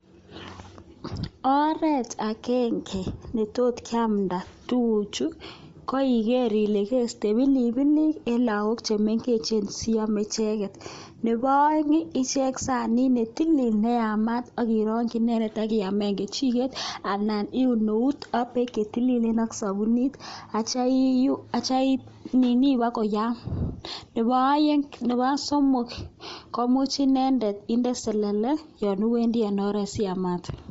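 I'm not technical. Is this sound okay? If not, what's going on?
No. The speech sounds breathy and grainy from start to finish, and nothing above about 7.7 kHz is heard, so it lacks crispness. This is likely Bluetooth LC3 compression, which squeezes sound to travel wirelessly, dropping the top and filling gaps with hiss.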